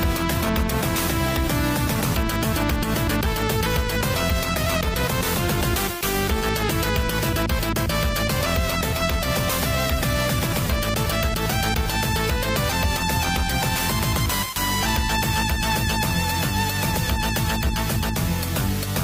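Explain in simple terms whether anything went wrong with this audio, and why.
Nothing went wrong with this audio that a careful listener would pick up on. No moment in it stands out as broken, interrupted or disturbed.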